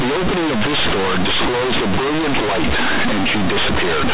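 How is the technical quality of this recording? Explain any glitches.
The quality is poor: the speech is buried in heavy, buzzy distortion from start to finish. The cause is companded audio read as linear. The recording is mu-law G.711, with its 4 kHz telephone bandwidth, but the logarithmic bytes are played directly as linear 8-bit samples instead of being expanded. Small positive and negative values land about half the scale apart, so every sign change swings across about half the output range. Quiet passages become as loud as peaks, the waveform is grossly bent, and pauses fill with loud, harsh noise.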